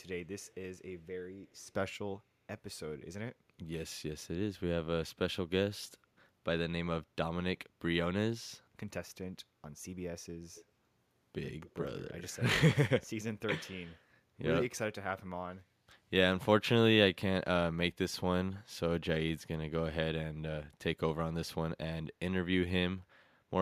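Faint echo leak appears at 0.41–0.55 s, 1.53–1.57 s, 10.54–10.65 s and 11.64–11.74 s: a delayed copy of the speech trailing by 210 ms. It is likely a far-end loudspeaker path the echo canceller did not fully cancel. The first two are very quiet, and the later pair are louder but still well below the speech.

At 15.65–15.81 s, the room sound is gated by the echo canceller. The background dips by about 6 dB for roughly 150 ms as the canceller suppresses the microphone during loudspeaker playback, then recovers when it releases.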